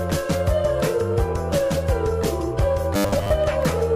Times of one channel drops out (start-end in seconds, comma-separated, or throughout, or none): none